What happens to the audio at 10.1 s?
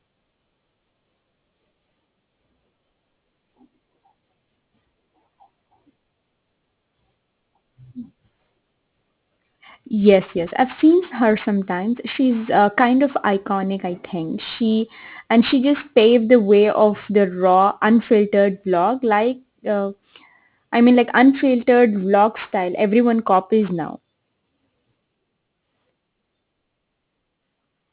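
Aliasing is present at 10.1 s, as it is for the whole clip. The speech sounds as if it was resampled from a high rate down to something like 8 kHz with no low-pass filter first, so energy above 4 kHz mirrors back below that line onto unrelated frequencies. Sibilants come out gritty and metallic, the spectrum runs right up to the 4 kHz edge, and the folded energy sits roughly 25 dB below the speech itself.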